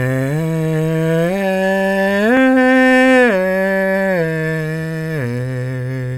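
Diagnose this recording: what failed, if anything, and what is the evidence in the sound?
Nothing in this music recording points to a failure at any stage of the chain. No stage, from the wiring through to playback, leaves a trace that needs diagnosing.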